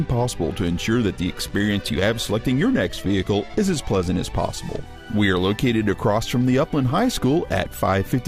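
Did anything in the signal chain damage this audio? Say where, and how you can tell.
Yes, and it happened on the network path. The sender's clock runs about 3 percent slow relative to the receiver, so this is clock drift between sender and receiver. The jitter buffer keeps draining, and the tempo wobbles faintly through the whole clip.

The receiver's fix shows up as repeated timing corrections from 0.18 to 8.17 s. It keeps repeating small slices to stretch the audio to 98 percent speed, adding around 150 ms in total. You hear it as uneven little hiccups rather than anything obvious.

There are also scattered short gaps between 1.59 and 3.08 s, roughly five of them, the longest around 10 ms. Those are lost or late packets, each patched by carrying the last sound forward. That leaves brief ticks and smears, about 50 ms of concealment overall.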